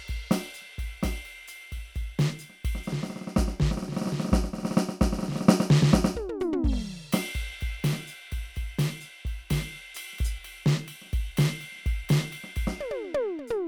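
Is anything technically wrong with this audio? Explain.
No technical faults are audible.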